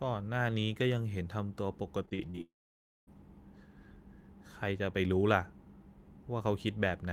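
From 2.05 to 2.39 s the speech breaks up with repeated packet loss, giving a robotic sound: five short gaps, the longest 36 ms, are patched by stretching the preceding sound, so about a third of the span turns choppy while the speech keeps going.

Right after, from 2.41 to 3.09 s, the sound smears into a fading buzz and then goes almost completely silent for about half a second before speech resumes with a piece missing. This is likely a long network dropout. Unlike the brief, rapid patches just before, it is one sustained hole.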